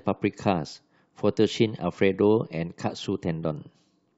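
No technical faults are audible.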